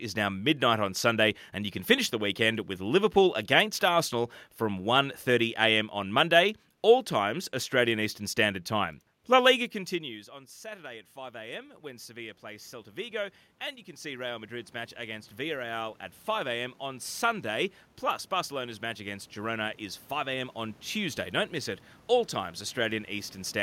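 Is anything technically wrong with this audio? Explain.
Yes. From 9.90 s to 23.58 s there is automatic gain rising. Just before 10 s the talker moves back and the level at the microphone falls by about 22 dB. The automatic gain control treats this as a quiet input and slowly raises its gain by about 19 dB over the rest of the clip. The voice creeps back up in level, and the room noise swells with it, so the background grows steadily louder.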